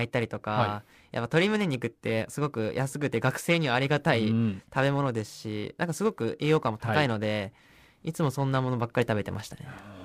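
Throughout the speech, periodic clock jitter adds a rough, metallic edge that disappears in the pauses. Interference is shaking the converter's clock at around 1 kHz. On a spectrogram, sideband copies flank each harmonic at that spacing, most visibly on the higher ones.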